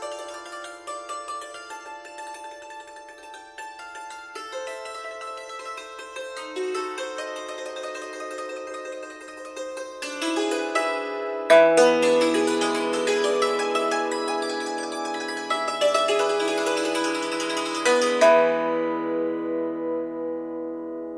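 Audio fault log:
No faults detected in the audio.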